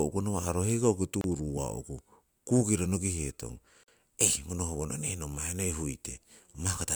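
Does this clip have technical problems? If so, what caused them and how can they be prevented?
Yes. Separately encoded pieces were joined without trimming each run's leading delay and final-frame padding, producing a gap at a join of encoded pieces: the speech drops to silence at 1.21–1.24 s (about 28 ms) and at 3.83–3.88 s (about 46 ms), just after "kukiro nokihetong", with smeared edges before resuming. Prevent it by encoding continuously or trimming encoder delay and padding before joining.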